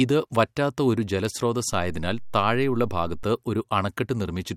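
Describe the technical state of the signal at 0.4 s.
At 0.4 s the speech signal is intact, with no dropout, click, distortion or other fault to be heard at that moment.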